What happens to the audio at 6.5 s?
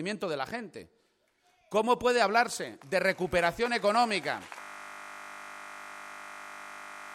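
At 6.5 s the audio is inside a system hang loop that runs from 4.61 s to the end. The system froze while the sound hardware kept replaying one 20 ms slice of its buffer, over a hundred times, which turns the audio into a steady 50 Hz buzz.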